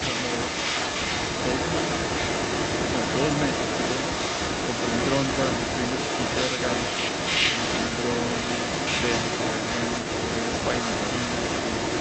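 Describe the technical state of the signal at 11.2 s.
An echo leak covers 0.0 to 12.0 s. A far-end canceller likely missed its loudspeaker pickup, so the speech repeats 0.38 s later at roughly equal loudness.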